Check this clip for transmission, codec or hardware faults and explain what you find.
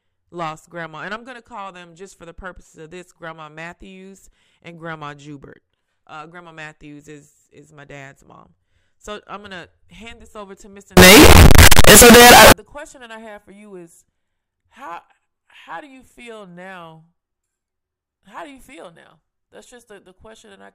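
One fault is present in this speech clip: a burst of signed and unsigned mixed up corruption from 10.97 s to 12.52 s. For that stretch the audio turns into very loud, harsh distortion, with quiet moments blasting at the same level as everything else. The likely cause is 16-bit samples being read with the wrong sign convention, which flips the top bit so that every zero crossing jumps across the full range.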